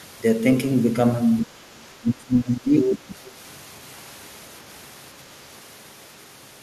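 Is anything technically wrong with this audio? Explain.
Yes. There are three kinds of fault.

Word clock ticks: from 0.87 s to 6.43 s, about seven sharp single-sample ticks arrive roughly every 0.7 s. This fits an unlocked digital link drifting by around 30 ppm.

Other side's voice leaking through: at 1.40 to 1.45 s, a brief second voice sits about 20 dB under the speech. At 2.89 to 2.93 s, it is only about 5 dB under. This is likely residual loudspeaker echo that the canceller missed.

Speech suppressed in double talk: at 1.46 to 1.57 s, the speech dips by about 20 dB. From 2.0 to 3.25 s, it is pushed down by up to about 25 dB for roughly a second, likely an echo canceller ducking during overlap.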